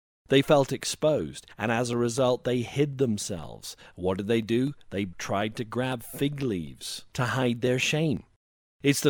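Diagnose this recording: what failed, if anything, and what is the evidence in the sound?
The failure is at the driver or buffer stage: periodic USB or driver dropouts. From 0.19 s to 8.92 s the speech carries small ticks every 0.25 s, around forty in all. Each is a tiny jump in the waveform, not a gap of silence. Something blocks the audio path at a fixed interval. A fraction of a millisecond of samples is skipped each time, and the splice clicks wherever speech is present.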